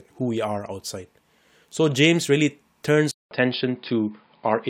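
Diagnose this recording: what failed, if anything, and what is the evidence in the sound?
Input switched to a poorer device at 3.11 s, just after "really turns". After about 0.2 s of silence, the speech continues at much the same level but with nothing above 5.1 kHz and a faint new noise floor. The likely cause is the capture driver changing to a narrower-band microphone or headset profile.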